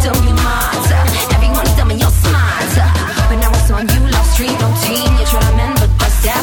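From 2.54 to 2.78 s the processor falls behind and misses a run of very short buffer deadlines, around fifteen of them, each lasting under a millisecond. Each miss leaves a hard-edged gap of silence, so the music tears into a gritty burst of processor overload crackle.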